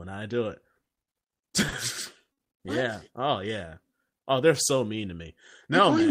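Just after "I do", from 0.85 to 1.75 s, the speech drags and stutters through four brief holds, the longest 40 ms: repeated stalls (stutter), as late packets repeatedly emptied the jitter buffer. At 2.32 to 2.40 s, a sound is held about 50 ms too long, a short stall from a late packet that arrived 50 ms behind schedule.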